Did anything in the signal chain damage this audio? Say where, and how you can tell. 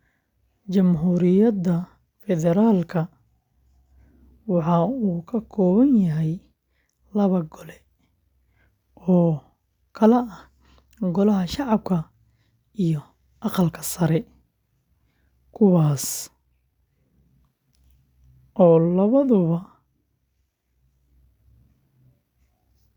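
No, nothing in the signal chain damaged this audio.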